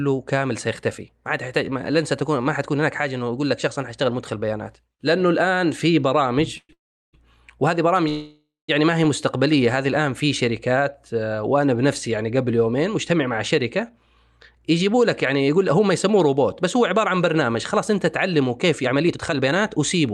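At 6.57 to 6.71 s, 6.73 to 7.15 s and 8.09 to 8.70 s there's a call audio freeze: the last sound smears into a fading buzz, then silence, likely from packets stalling and draining the jitter buffer. From 14.55 s to the end, a jitter buffer speed-up trims pitch periods to shed around half a second, so the speech runs about 10% fast and sounds rushed.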